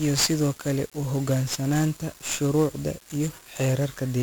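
From start to finish the speech has been through 1-bit DFPWM compression, heavily degraded, at a rate that fits roughly 48 kbps. Each sample keeps only a single bit, which nudges an adaptive level up or down rather than recording the true waveform. The coarse steps produce dense broadband quantisation noise: the voice comes out fuzzy and crackly throughout, with its upper frequencies smothered under a constant layer of hiss.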